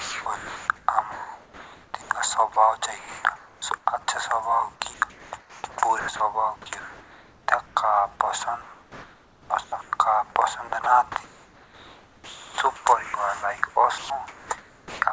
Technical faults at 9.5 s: comfort noise in place of the background; onset clipped by the voice detector

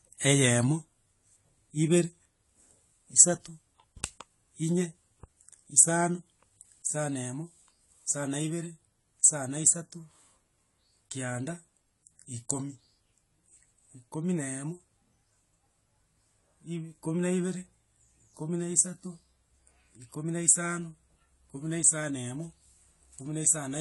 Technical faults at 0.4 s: AAC compression

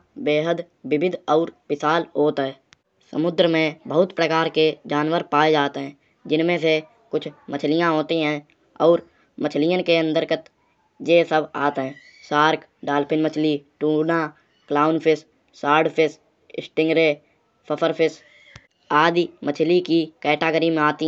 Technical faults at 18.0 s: none

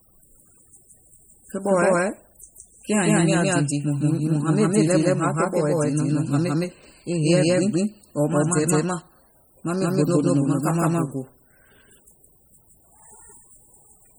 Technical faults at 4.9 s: doubled audio track; MP3 compression

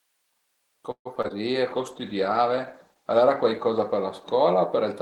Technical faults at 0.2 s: none

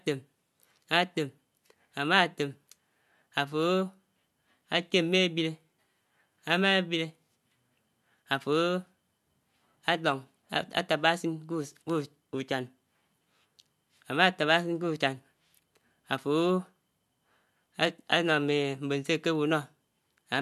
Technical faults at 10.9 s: none

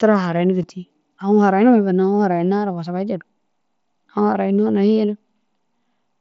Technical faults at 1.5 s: none

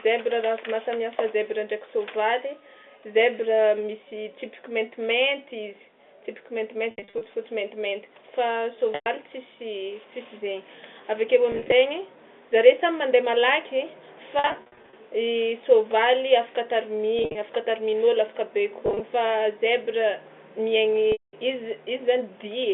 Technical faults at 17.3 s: packet loss with pitch repetition

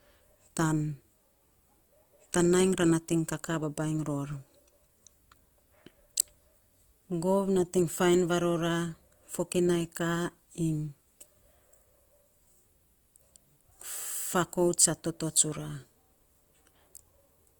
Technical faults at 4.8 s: Opus compression

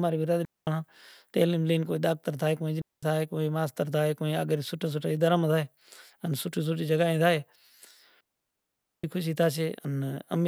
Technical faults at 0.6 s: digital wireless dropout

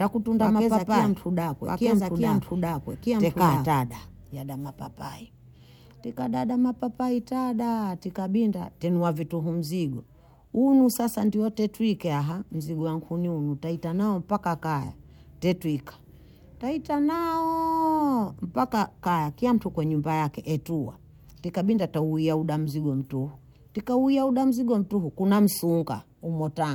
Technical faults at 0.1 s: doubled audio track

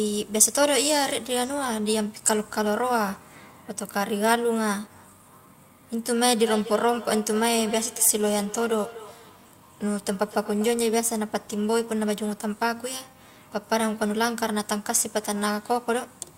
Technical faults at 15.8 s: none

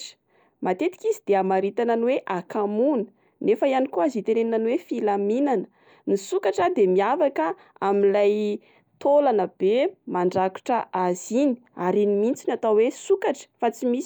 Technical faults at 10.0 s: none

